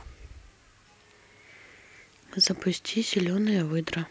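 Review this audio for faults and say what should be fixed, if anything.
Nothing stood out on listening, so there is nothing here that needs fixing.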